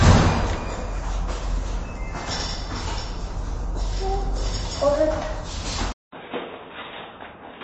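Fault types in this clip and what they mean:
MP3 compression: Throughout, the sound is watery and swirly, with plainly audible smearing and nothing above 8.3 kHz. This is likely low-bitrate MP3 encoding, around 32 kbps, which cuts the treble and drops weak frequency detail from frame to frame.
Input switched to a poorer device: At 5.92 s a 200 ms silence breaks the sound. It then comes back about 10 dB quieter and boxier, with nothing above 3.8 kHz and fresh background noise about 45 dB down. The likely cause is a change to a narrower-band input device.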